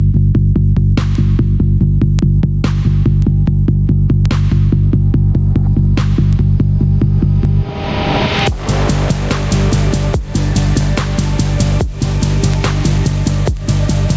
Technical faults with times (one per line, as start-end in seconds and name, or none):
0.00-14.16 gain pumping
0.12-13.57 word clock ticks